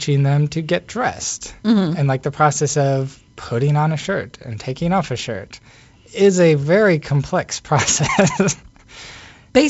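No faults are present in the speech, which carries G.722 wideband telephone coding at 56 kbit/s, with nothing above about 7.7 kHz, a light hiss in the upper band and slightly more grain in the lower band from the reduced bit allocation.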